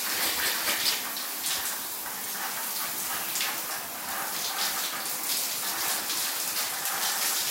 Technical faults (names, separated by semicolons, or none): none